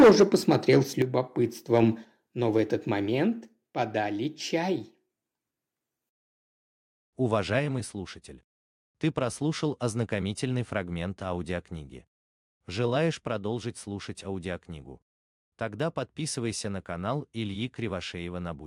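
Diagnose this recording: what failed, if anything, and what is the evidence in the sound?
Microphone overload at the converter. From 0.0 to 0.77 s, and again at 1.74 to 1.8 s, peaks sound flattened and crackly. An input about 12 dB, then about 2 dB, too hot is likely.

Microphone volume stepped down in call processing. Level drops suddenly at 1.02, 2.04, 3.06, 7.59 and 13.11 s, by about 8, 4, 2, 3 and 2 dB, likely automatic gain cuts.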